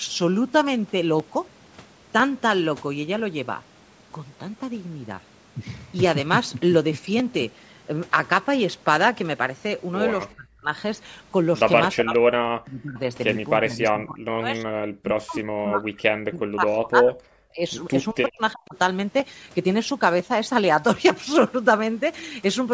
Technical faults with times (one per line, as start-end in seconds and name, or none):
10.36-10.71 speech suppressed in double talk
11.94-12.99 speech suppressed in double talk
11.97-12.15 echo leak
13.61-17.62 speech suppressed in double talk
18.13-18.76 speech suppressed in double talk